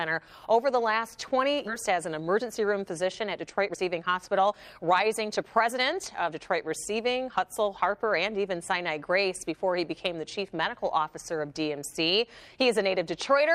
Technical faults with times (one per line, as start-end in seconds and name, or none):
1.67-1.69 skip ahead
3.36-6.30 jitter buffer speed-up